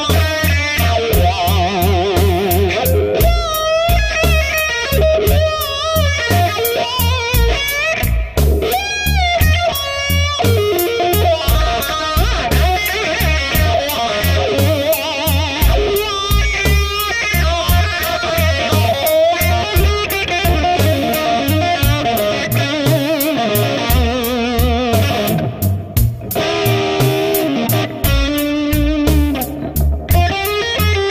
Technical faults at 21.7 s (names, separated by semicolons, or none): none